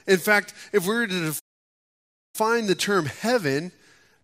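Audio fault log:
1.39–2.35 s, playback stall: the speech cuts to silence mid-flow for about 0.95 s, then carries on. The player likely ran short of data or had its output thread blocked, so nothing reached the output until it recovered.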